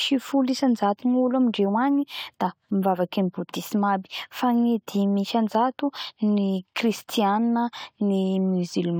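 No technical faults are audible anywhere in the speech recording.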